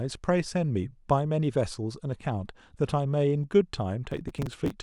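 Speech with processor overload crackle from 4.12 to 4.72 s: dozens of tiny skips, consistent with buffers of a few milliseconds missing their deadlines, tear the sound into gritty crackle. On a waveform, short gaps with hard edges appear; a spectrogram shows dense broadband vertical streaks.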